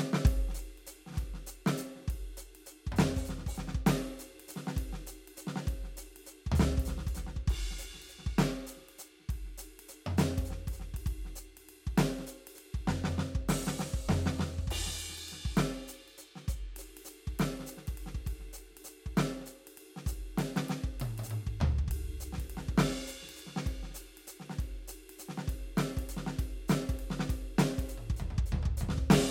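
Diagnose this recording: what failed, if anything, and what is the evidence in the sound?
Nothing in the music points to a failure at any stage of the chain; the signal holds steady and continuous throughout.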